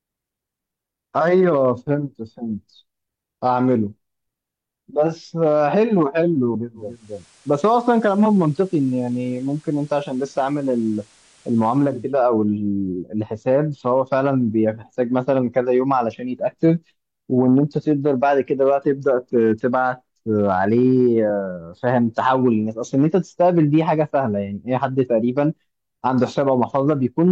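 At 6.74 s the radio loses digital and blends over about 446 ms to FM: hiss rises, roughly 30 dB down, level drops about 2 dB, returning at 12.21 s.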